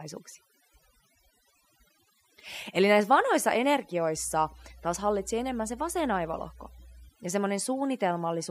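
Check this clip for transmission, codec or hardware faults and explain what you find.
Two faults here: an overdone noise removal that colours the whole clip, and a burst of mains hum partway through.

The overdone noise removal runs throughout. A denoiser set far too hard is shutting off individual frequency bands whenever they sit near its noise estimate, taking the quieter parts of the speech along with them. The background drops and breaks up into little twinkling specks.

The mains hum sits from 4.16 to 7.09 s. Power-line energy is leaking into the signal, probably via a ground loop or a nearby transformer, giving a steady 60 Hz drone with a few low harmonics, roughly 20 dB under the speech.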